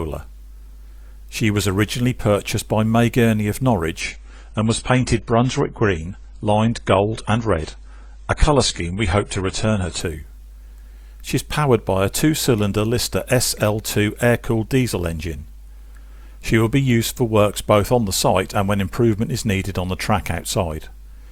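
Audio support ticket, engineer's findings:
Adaptive stream at a lower bitrate, 4.00–10.00 s: sudden dull, swirly stretch, nothing above 10 kHz, fits a low AAC rendition. Unlike a dropout, no gap at either switch.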